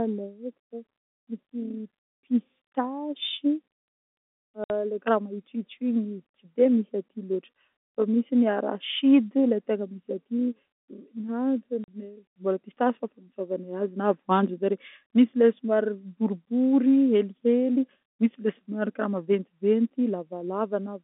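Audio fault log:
4.64 to 4.70 s and 11.84 to 11.88 s, packet loss filled with silence: the sound drops out for 60 ms and then 40 ms with hard edges. The gaps fit 20 ms packets being lost and replaced by silence on this G.711 telephone-band line.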